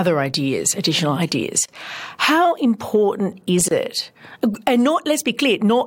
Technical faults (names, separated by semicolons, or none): gap at a join of encoded pieces